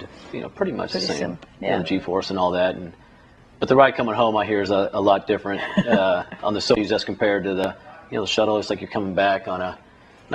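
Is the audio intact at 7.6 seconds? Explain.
No. At 7.64 s there is a small jump forward in the sound, with no gap of silence. This is likely a dropped buffer (overrun): around 10 ms of samples were overwritten before being read, and the surrounding audio was joined directly.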